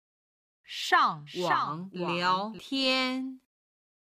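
A doubled audio track runs from 1.27 s to 2.59 s. During that span a second, full-band copy of the audio sits about half a second behind the original and roughly 5 dB quieter. It carries no decay or room colour, so it reads as a clean repeat rather than an echo, and it switches in and out abruptly at both ends. The cause is likely a second capture through a slower path, or an edit leaving two out-of-step copies.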